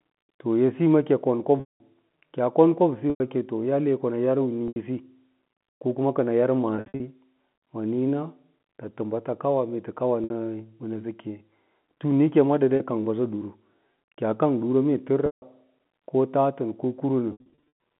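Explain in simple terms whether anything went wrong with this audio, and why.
Packet loss with pitch repetition breaks up the speech at 1.6, 3.1, 4.68, 6.76, 10.24, 12.76, 15.26 and 17.32 s. Each gap is patched by repeating the last voice cycle, which gives a brief buzzy hold. The longest drops, at 1.6 s after "edsiyi ma kɚi kon" and around 17.3 s, fade into silence.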